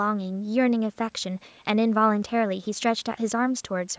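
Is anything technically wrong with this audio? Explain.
No, nothing stood out as wrong on listening to this speech, which carries the ordinary bass trim of a call's microphone processing.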